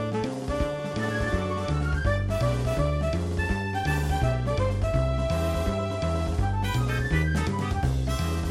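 No dropouts, clicks, distortion or timing glitches turn up anywhere in the audio, so there is nothing to flag.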